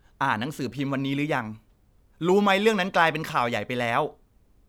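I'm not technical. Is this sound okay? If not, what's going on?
Yes, this sound is okay, and there's nothing going on with it that needs fixing.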